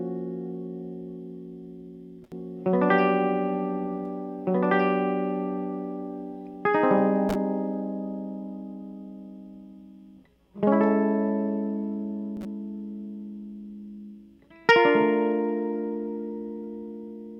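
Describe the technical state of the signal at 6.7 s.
At 6.7 s the music is caught in a doubled audio track, running from 2.32 to 7.74 s: a second copy is mixed in, most likely captured again through a slower path. It trails by around two seconds at roughly equal level, dry and full-band, starting and stopping abruptly.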